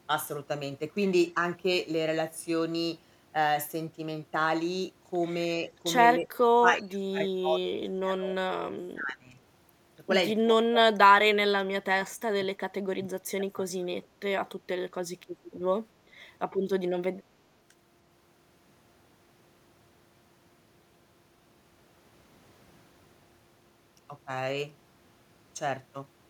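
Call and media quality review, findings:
Speech suppressed in double talk at 6.19–9.39, 10.44–10.51, 10.68–11.37, 11.73–11.88 and 12.38–13.87 s. Speech dips up to roughly 30 dB, likely echo canceller attenuating near-end talker during overlap.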